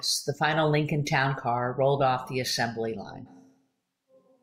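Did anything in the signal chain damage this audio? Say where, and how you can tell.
Yes. At the capture stage, right after "rolled off the assembly" at 3.28 s, the speech abruptly turns roomy and thin, drops about 5 dB, and room noise rises to roughly 25 dB below it until the end. A likely switch to a distant microphone, not a gain or EQ change, since reverberation arrives with it.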